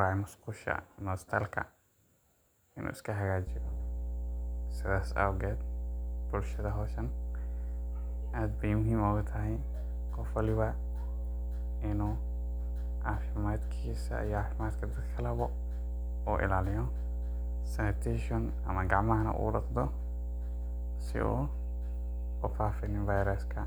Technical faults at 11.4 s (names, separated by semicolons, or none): mains hum